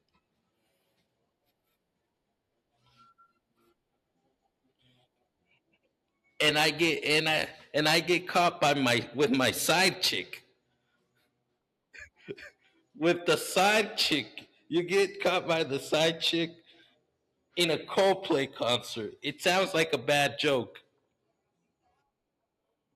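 No technical faults can be heard anywhere in the speech; the signal holds steady throughout with nothing in its reproduction that stands out as having gone wrong.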